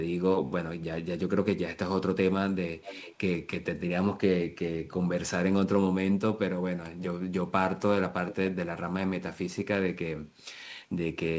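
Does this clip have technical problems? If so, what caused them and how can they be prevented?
Yes. An echo canceller on a loudspeaker end likely let some of its microphone pickup through, so an echo leak sends a faint delayed copy of the speech back, about 15 dB down, from 2.82 to 3.18 s (440 ms late) and 8.28 to 8.35 s (430 ms late). Using a headset or tuning the echo canceller's delay estimate prevents it.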